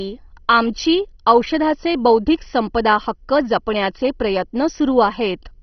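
Throughout, the speech is dull, with nothing above 6.1 kHz and a gurgling, granular grit: upper sub-bands dropped and coarse quantisation, likely heavy MP2 compression.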